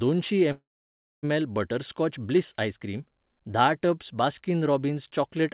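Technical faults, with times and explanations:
0.52–1.26 s, call audio freeze: a brief fading buzz or hiss, then 0.6 s of silence (flat waveform, blank spectrogram columns), likely a drained jitter buffer; "बटरस्कॉच ब्लिस आइसक्रीम धा" resumes with nothing lost.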